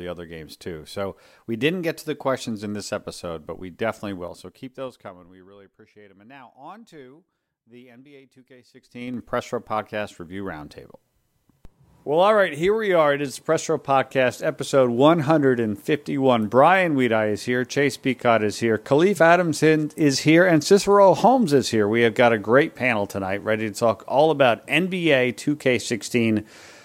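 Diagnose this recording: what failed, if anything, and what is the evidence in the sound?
A gain stage in the driver or buffer processing applied level changes in coarse steps with no smoothing, producing zipper noise. From 4.18 to 5.67 s the level drops by roughly 20 dB in 3 dB jumps, about five a second, each leaving a small click. From 8.73 to 9.20 s it climbs back at around fifteen steps a second, bunching the ticks into a brief zip.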